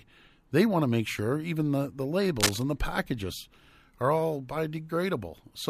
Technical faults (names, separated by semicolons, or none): cable scratch noise